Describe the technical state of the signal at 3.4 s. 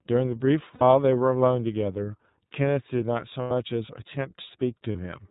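Lost iLBC frames from 3.42 to 3.51 s: roughly 90 ms of audio never arrived, which fits three consecutive 30 ms frames going missing. The decoder filled the hole by looping the last pitch period it had, blended with noise, so the speech turns briefly into a held, faintly buzzy vowel. Because each iLBC frame decodes independently, the voice snaps back cleanly right after 3.51 s.

Around that moment, as across the whole clip, the iLBC codec is plainly audible. Its coding leaves the speech intelligible but slightly coarse and synthetic, and the band stops at 4 kHz, so sibilance and air are missing. The roughness and frame pacing suggest the 13.33 kbps mode with 30 ms frames, in which each frame's excitation is coded without borrowing from the previous one.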